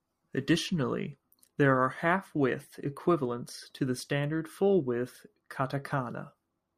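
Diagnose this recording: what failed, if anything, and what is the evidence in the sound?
Nothing failed in this speech recording. No stage from capture through playback leaves any audible trace of a fault.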